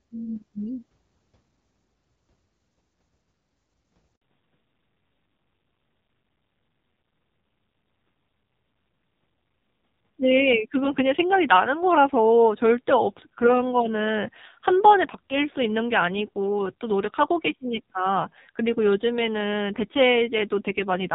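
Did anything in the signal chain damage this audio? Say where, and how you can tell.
Yes. A handover gap at 4.16 to 4.22 s is network-stage damage: the speech falls away within a few tens of milliseconds and leaves a 60 ms hole of silence before sound resumes. This happens when the phone moves the call from one network to another and no speech frames reach the decoder during the switch. The decoder has nothing to play, so whatever was said in that instant is lost.

A fallback to narrowband follows immediately, from 4.22 s to the end of the clip, at the codec stage. Before the handover, the speech carries the wider, clearer band of HD Voice, which fits AMR-WB at around 12.65 kbit/s. Afterward, nothing above 4 kHz remains, and the speech becomes duller and rougher. This points to the call renegotiating down to the narrowband AMR codec at a low rate, likely 5.9 kbit/s, on the new network.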